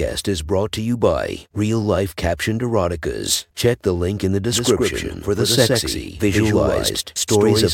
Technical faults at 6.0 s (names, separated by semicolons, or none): doubled audio track